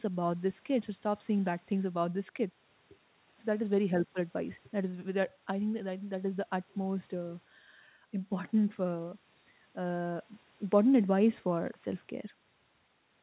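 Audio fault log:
No faults are present: the room noise sits about 37 dB below the speech, and the call path's narrowband coding, with nothing above 4 kHz, fits a G.711 mu-law connection working as expected.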